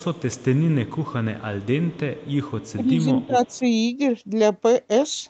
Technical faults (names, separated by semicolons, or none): echo leak; speech suppressed in double talk